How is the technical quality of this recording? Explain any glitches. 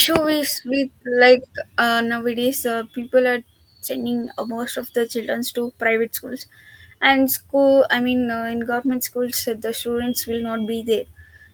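The recording has three small rough spots where lost packets were rebuilt from error correction. The first is at 3.01–3.03 s, right after "like uh nowadays uh". The second is at 4.21–4.27 s, just before "uh most of the". The third is at 8.85–8.95 s, between "I mean uh in" and "schools uh". Each missing stretch was patched from a low-bitrate backup copy carried in the following packet, so nothing drops out. Those 20, 40 and 60 ms bits just sound grainier and noisier, which fits one, two and three lost packets.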